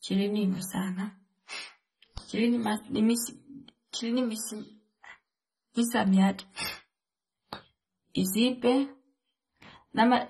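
Throughout the speech, the audio was likely squeezed through AAC compression at a very low rate, with the encoder discarding spectral detail it judged inaudible. Nothing survives above 13.7 kHz, so the top is dull, and the thinned-out bands leave a warbling, fizzy texture on sustained sounds and sibilants, which fits AAC-LC at roughly 24 kbps. The codec damage is plainly audible from start to finish.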